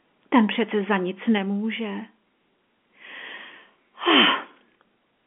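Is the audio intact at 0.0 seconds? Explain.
Yes, the audio is intact at 0.0 seconds, with nothing amiss beyond the narrow telephone-band sound of its G.711 coding.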